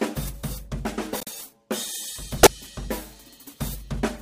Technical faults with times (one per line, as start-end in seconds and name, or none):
1.13-1.29 corrupt frame decoded
2.37-2.48 corrupt frame decoded